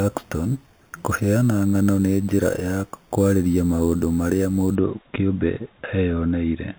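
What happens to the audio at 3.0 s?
At 3.0 s the speech carries imaging from sample-and-hold upsampling (0.00–4.75 s): 8 kHz audio repeated to 44.1 kHz unfiltered gives a metallic fizz about 22 dB down. A spectrogram shows mirrored harmonics between 4 and 8 kHz; the waveform looks stair-stepped.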